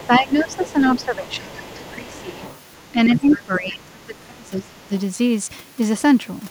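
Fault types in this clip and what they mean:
Other side's voice leaking through: a faint second voice sits under the talker, about 20 dB down until 3.4 s, likely unremoved loudspeaker echo; it adds sound, not removes it.
Speech suppressed in double talk: the talker's own voice dips in pieces, roughly 15 dB early and 25 dB from 2.9 to 4.9 s, likely echo-canceller overreaction.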